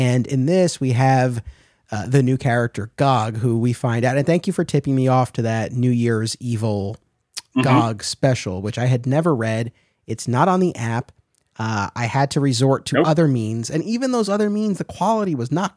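No technical faults can be heard at any point in the recording, so there are none to describe.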